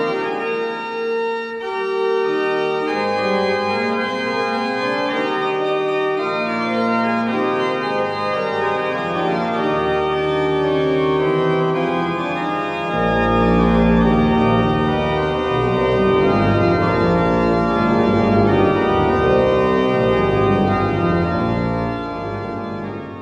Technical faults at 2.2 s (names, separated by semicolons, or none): none